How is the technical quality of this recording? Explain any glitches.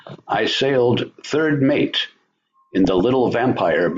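The recording has clear technical problems: constant low-rate coding damage plus two short bursts of reception corruption.

Throughout, the speech sounds dull and plainly gurgly, with a granular roughness and a missing top end. This is likely MP2 compression at a low rate, which fits roughly 80 kbps. Starved of bits, the upper sub-bands drop out and those remaining are coarsely quantised.

At 0.97 s, just before "third mate", and again from 2.85 to 3.01 s, there is DAB burbling: a brief burst of noise blips over the speech. A small fraction of bit errors slipped past error correction, corrupting samples so short blips of noise appear in single sub-bands.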